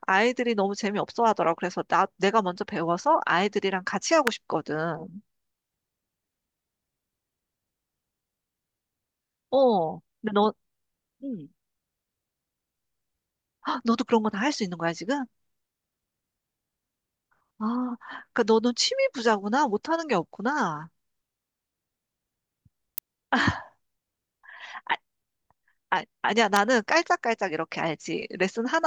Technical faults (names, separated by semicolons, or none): electrical switching spike